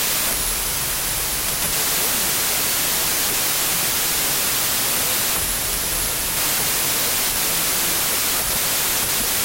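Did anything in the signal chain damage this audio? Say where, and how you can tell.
Yes, at sample-format conversion: a wrong sample width throughout. The speech is buried in loud noise and runs slow and low, at 0.75 times, which fits 32-bit integer data read as packed 24-bit. The waveform looks like dense noise, and the spectrogram shows broadband noise with faint harmonics beneath.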